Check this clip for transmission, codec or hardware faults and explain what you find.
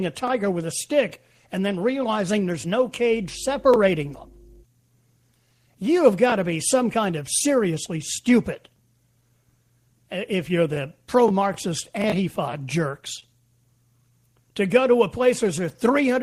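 One transmission fault is audible in this speech clip: a short stall from a late packet at 13.20 to 13.23 s. A packet arrived after its playout deadline, leaving the jitter buffer empty. The receiver bridged the gap by extending the preceding sound for about 23 ms, then resumed from the same point, so nothing is lost, but playback now runs 23 ms later. The result is a briefly held sound with a faint buzzy or dipped texture.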